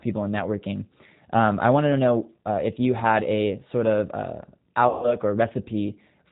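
Speech, carried the whole way through a narrowband VoIP codec, and it sounds like G.729 at 8 kbit/s. Nothing above 4 kHz makes it through, so the sound is boxed-in and dull, and the codec damage is plainly audible. The voice is rebuilt from a vocal-tract filter, a pitch predictor and a handful of pulses per frame, which leaves it intelligible but with that rough, slightly synthetic edge. Then from about 4.89 to 5.18 s there's VoIP packet loss concealed by the speech codec. Roughly 140 ms of audio went missing, which fits a short run of lost packets. The decoder kept extending its last pitch and filter state with falling gain, so you hear a stretched, buzzy tone or coloured noise that fades rather than a clean gap. Because each frame leans on the previous one, the voice stays weakened and smeared for a bit after the real audio resumes, which is why the disturbance outlasts the actual loss.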